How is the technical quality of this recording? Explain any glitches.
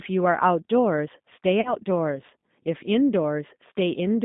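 The technical quality is poor: the speech sounds narrow, rough and faintly synthetic throughout, with one brief dropout.

Throughout, the speech is confined to roughly 150 Hz to 3.7 kHz and has a plainly audible gritty, artificial texture. This is the G.729 codec at 8 kbit/s, which resynthesises speech from a vocal-tract filter, a pitch predictor and a few pulses per frame rather than preserving the waveform.

From 1.61 to 1.75 s the speech smears and fades, and then comes back weak or distorted. This is VoIP packet loss concealed by the speech codec. About 40 ms of audio went missing, which fits two lost packets. The decoder extended its last pitch and filter with falling gain, and because each frame builds on the previous one, recovery lagged after the audio resumed.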